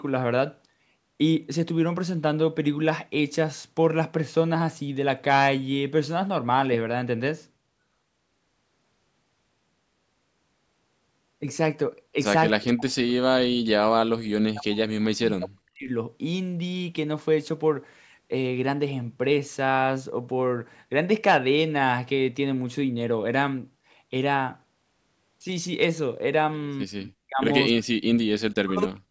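Speech clip with speech suppressed in double talk at 12.54–15.91 s, 26.84–27.43 s and 28.65 s to the end. The voice drops by roughly 40 dB, likely from an echo canceller muting it.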